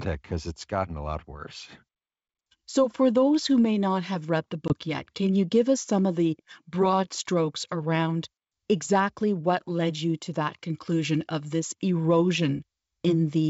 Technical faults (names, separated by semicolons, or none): packet loss on an ADPCM call